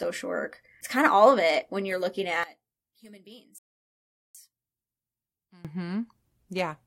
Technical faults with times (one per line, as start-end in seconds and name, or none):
2.43-5.65 one channel inverted
3.58-4.35 rebuffering stall